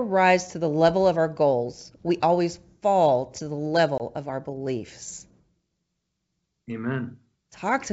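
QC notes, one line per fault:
3.98–4.02 s, packet loss on an ADPCM call: a hard-edged 20 ms hole of silence, about one packet's worth. The sound then returns slightly distorted before settling within a few tens of milliseconds. With the packet gone, the receiving ADPCM decoder's adaptive predictor and step size drift out of step with the sender's. The wideband G.722 coding stays clear up to 7 kHz around the gap.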